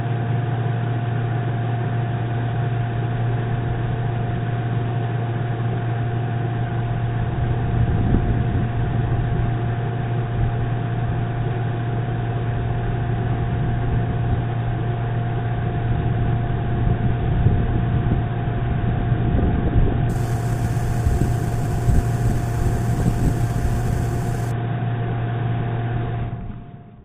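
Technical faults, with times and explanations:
20.10–24.51 s, imaging from sample-and-hold upsampling: unsmoothed repeated samples, which fits an 8 kHz source, add a metallic fizz about 25 dB down, seen on a spectrogram as a mirrored 4–8 kHz band.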